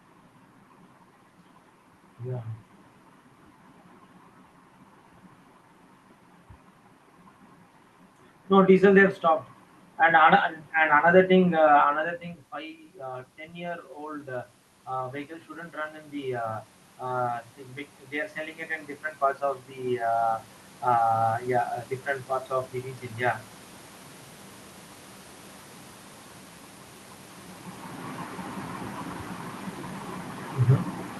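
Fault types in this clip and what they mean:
Automatic gain rising: the gain control lifts a too-quiet input gradually, so speech and room noise swell together in three slow rises, by about 4 to 8 dB.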